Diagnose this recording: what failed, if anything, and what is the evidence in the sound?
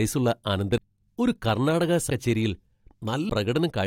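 Codec stage: compressed frames skipped at 0.77, 2.09 and 3.28 s; the speech jumps ahead roughly 300, 400 and 200 ms, fitting whole 21.3 ms frames missing.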